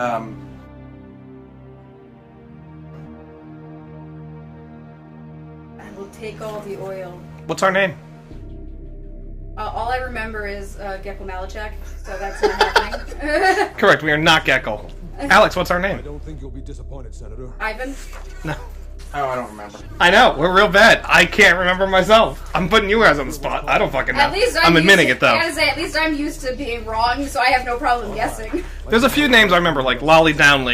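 At 3.05 to 3.07 s there is a skip ahead: roughly 0.7 s of audio was discarded while later material was already queued, so playback leaps forward with no silent gap. Unlike a dropout, nothing is muted; the two sides simply butt together.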